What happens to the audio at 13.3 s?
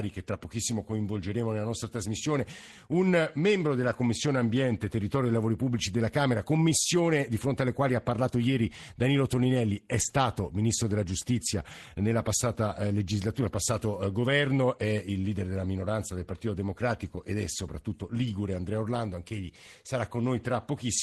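Packets were lost at 13.33–13.39 s, just after "nella passata eh", and rebuilt from error correction, so about 40 ms of speech plays as rougher, noisier low-bitrate copies without a gap.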